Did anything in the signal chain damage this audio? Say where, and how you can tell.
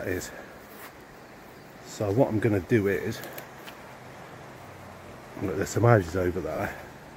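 Yes, the damage is on the Bluetooth link: lost LE Audio frames. At 0.43 s there's a 20 ms stretch, and from 6.55 to 6.59 s a 40 ms one, which fits two and then four 10 ms frames dropping out. In both places the sound turns briefly into a noisy, smeared version of itself, because the LC3 decoder concealed the gaps by replaying the last spectrum with randomised signs. The light codec compression sits underneath and isn't what you're hearing there.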